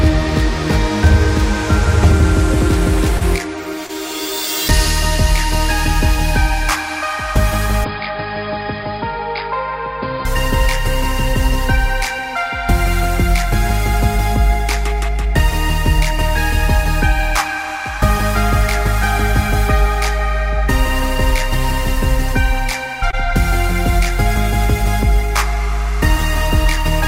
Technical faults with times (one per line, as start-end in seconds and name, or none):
3.17-3.23 short concealed packet loss
3.87-3.91 short concealed packet loss
7.84-10.25 input switched to a poorer device
23.11-23.15 short concealed packet loss